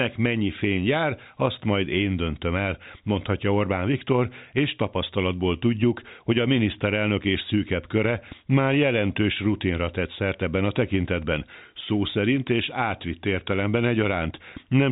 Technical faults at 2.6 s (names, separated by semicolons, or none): none